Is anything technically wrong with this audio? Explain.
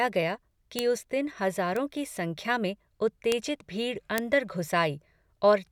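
Yes. Bit error spikes occur at 0.79 s, just before "उस दिन"; at 1.76 s, between "उस दिन" and "की संख्या में"; at 3.32 s, between "की संख्या में" and "भीड़ अंदर"; and at 4.18 s. In each, a flipped bit makes one or a few samples leap by a power of two and then snap back, peaking at about -2, -14, -8 and -2 dBFS. Each is heard as a single sharp, broadband tick that has nothing to do with the speech. The 3.32 s tick comes from a short run of three corrupted samples rather than one.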